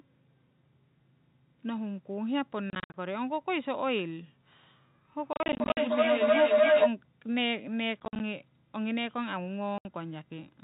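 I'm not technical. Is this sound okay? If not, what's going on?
No. Two things go wrong.

Packet loss filled with silence: bits of the speech go missing and are replaced by sudden gaps. It happens around 2.7 to 2.94 s, 5.33 to 5.77 s, 8.0 to 8.2 s and 9.78 to 9.85 s. The gaps are short and scattered, which fits pieces of about 10 ms each.

Feedback howl: from 5.18 to 6.97 s a whistling tone around 700 Hz builds up and gets louder than the speech. It pulses about three times a second. Sound is looping from a loudspeaker back into a microphone.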